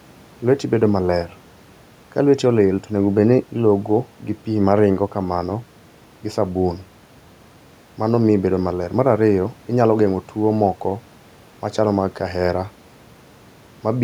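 Speech recording; no technical faults detected on listening.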